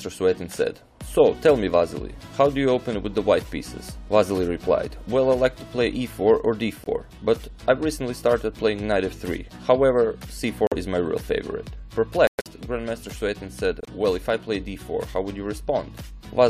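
The audio drops out four times with the classic corrupt frame muted signature: abrupt silent holes at 6.84 s (about 36 ms), 10.67 s (about 66 ms), 12.27 s (about 206 ms) and 13.81 s (about 88 ms). Each gap looks like one to several rejected compressed frames that the player replaced with silence, and the timing stays intact.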